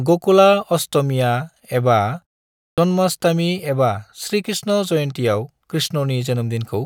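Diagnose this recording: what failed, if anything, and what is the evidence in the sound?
The playback device nodded off during the 0.55 s pause: at 2.73 s, "जन्माष्टमि एबा" arrives with about 47 ms of its onset swallowed while the output woke back up, a clipped start after a pause.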